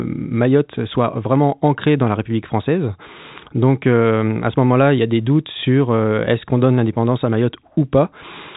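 Nothing here stands out as a fault; the speech simply carries the usual narrow band of G.711 telephone coding, with nothing above about 3.8 kHz, just as a phone line would deliver it.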